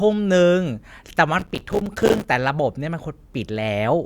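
From 1.39 to 2.24 s the speech is overlaid with a burst of gritty crackle, like tearing, that stops abruptly. This is processor overload crackle: the processor repeatedly missed its deadlines for short buffers of about 5 ms, and dozens of them dropped out as hard-edged silent gaps.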